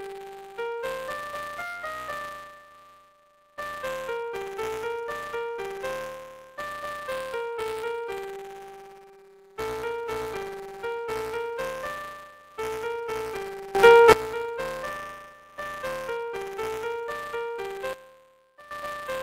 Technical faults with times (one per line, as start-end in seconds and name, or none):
0.00-19.22 buffer tearing
13.75-14.12 sudden gain jump
17.93-18.71 sudden gain jump